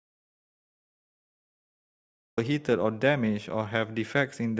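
The speech clip opens in dead silence, with no room tone at all, until the sound comes in mid-flow at 2.38 s. This is an audio dropout to silence, likely from a lost input such as a disconnected device or failed link while silence kept being written, so whatever preceded it is missing.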